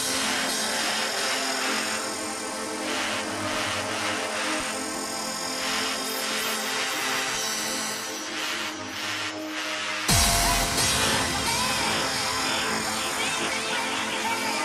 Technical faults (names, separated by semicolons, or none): none